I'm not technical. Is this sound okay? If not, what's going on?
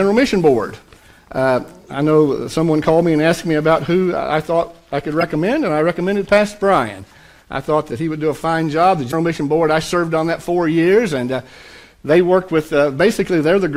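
No. Damaged data in a compressed stream causes brief glitches at 1.00–1.04 s, 5.21–5.23 s and 9.08–9.14 s. Small pieces of the compressed file are corrupted, so the player misreads them and briefly loses its place, producing a short chirp or blip each time.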